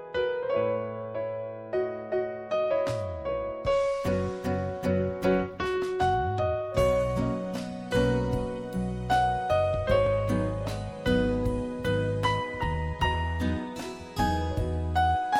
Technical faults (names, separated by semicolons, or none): overlapping chunks